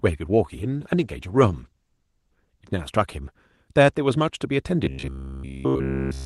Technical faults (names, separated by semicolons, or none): call bitrate drop; robotic sound from repeated short buffers